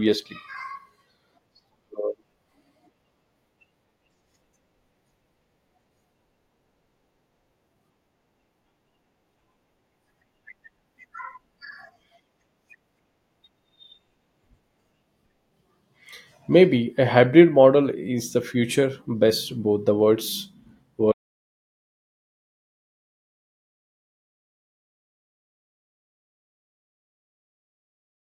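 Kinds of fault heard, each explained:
Audio dropout to silence: from 21.12 s to the end of the clip, about 7.1 s, the speech cuts off mid-flow and is replaced by silence, with no room tone or background hiss left. The recording chain kept writing silence after its input vanished, most likely because the microphone or link disconnected or a mute was engaged, so whatever was said during those final seconds was never captured.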